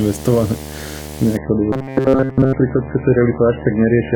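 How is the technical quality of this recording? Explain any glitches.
Technically it's in rough shape, with three separate problems stacked on the speech.

Video or display buzz runs throughout: a 75 Hz hum with hash above it, about 15 dB below the speech, from a screen or video cable leaking into the audio path.

At 1.37 s the adaptive stream drops to a lower bitrate until the end. Codec artefacts rise abruptly, consistent with a very low MP3 rate, around 8 kbit/s.

From 1.73 to 2.53 s the speech turns rigid and metallic with a fixed 133 Hz buzz, likely robotic sound from repeated short buffers: roughly 7.5 ms chunks replayed in place of nearly all the real audio.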